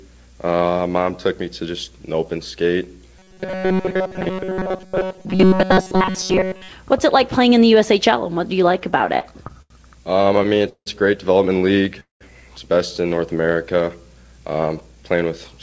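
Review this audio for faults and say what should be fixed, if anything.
From 3.19 to 6.70 s the audio turns into a rigid, metallic buzz at 188 Hz. The likely cause is robotic sound from repeated short buffers: the receiver replays a short stretch of about 5.3 ms over and over instead of new audio, so most of this span is repetition and the loop length sets the buzz pitch. Prevent it by keeping the audio callback fed on time.

Repeated stalls (stutter) occur in two runs. From 8.66 to 9.72 s about a fifth of the span is concealed, with the longest hold 82 ms. From 10.22 to 10.88 s about a third is concealed, with the longest hold 170 ms. In both runs late packets emptied the jitter buffer, the last sound was extended each time, and nothing was lost, so the audio drags. Prevent this by stabilising network delay or giving the jitter buffer more target depth.

A call audio freeze runs from 12.00 to 12.23 s. 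About 200 ms is filled, the last sound fades, and roughly 140 ms of it is silence before playback resumes where it stopped. The likely cause is a delay jump of about 200 ms in the network. Prevent it by locating the link or route causing the burst delay.

A jitter buffer speed-up runs from 14.54 to 15.60 s. The audio plays at 114% speed with pitch unchanged, because about 150 ms of pitch-period pieces were cut to drain excess buffered delay, and it sounds hurried. Prevent it by avoiding the packet bunching that overfills the buffer.

The audio has no content above 8 kHz, which fits G.722 at 64 kbps on the call path.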